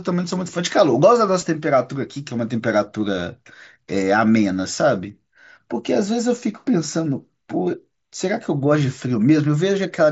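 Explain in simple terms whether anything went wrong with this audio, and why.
Yes, one small thing went wrong. At about 1.41 s there is concealed Bluetooth headset packet loss. A tiny piece of audio, about 7.5 ms, never arrived from the headset. That fits a single lost packet. The phone filled the gap by repeating a matching bit of the sound just before it. The patch is nearly hidden. The audio is carried by the mSBC headset codec.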